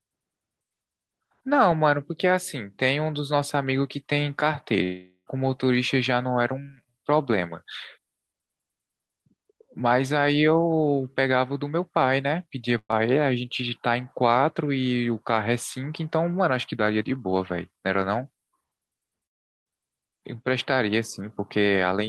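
From 4.83 to 5.28 s the sound trails off into a fading buzz or hiss for nearly half a second, then jumps ahead; that's likely a long network dropout. At 12.78 to 12.91 s there's a burst of packet loss: about 120 ms goes missing, papered over with the last sound held and decaying before the audio picks up further on. From 19.26 to 19.71 s it's much the same, likely another long network dropout, but this time roughly 0.4 s of the gap is near-silence.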